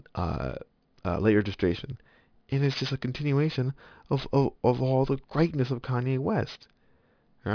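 Gritty, metallic hiss clings to the sibilants from start to finish, and the top of the spectrum runs hard up to a wall near 5.5 kHz with nothing above it. That is aliasing. The speech appears to have been brought down to a rate of about 11 kHz without first removing what lay above 5.5 kHz, so that energy folded back below the edge as false, unrelated tones, roughly 20 dB under the signal.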